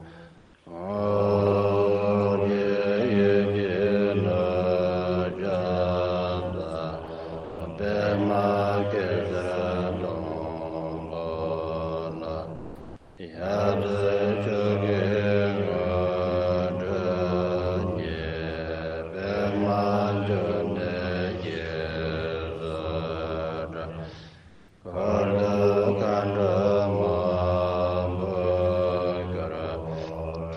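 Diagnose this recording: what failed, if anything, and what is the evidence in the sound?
Comfort noise in place of the background at 0.37–0.53, 12.55–13.17 and 24.48–24.81 s. Backgrounds turn steady and featureless. Likely codec discontinuous transmission.

Sound dropped by the voice detector at 7.05 s and 7.44–7.59 s. Sound briefly gives way to steady noise. Likely codec detector misjudged it as background.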